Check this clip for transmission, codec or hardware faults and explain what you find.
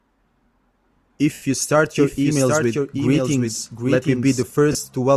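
Two faults are present in this speech clip: two dropouts from lost Bluetooth LE Audio frames, and a doubled audio track in the middle section. The light LC3 coding grain is the normal behaviour of the link and is not one of the faults.

Lost LE Audio frames, 1.33–1.42 s and 4.72–4.75 s: The link lost about 90 ms of audio in the first gap and 30 ms in the second, which fits nine and three 10 ms LC3 frames. The decoder filled the gaps by repeating the last spectrum with scrambled phase, so the speech smears into noisy hiss.

Doubled audio track, 1.97–4.43 s: A second copy of the speech sits roughly 0.7 s behind the first, about 5 dB quieter. The likely cause is a slower second capture path or an edit holding two misaligned copies. The result is a dry, full-band echo that starts and stops abruptly, with no room tail.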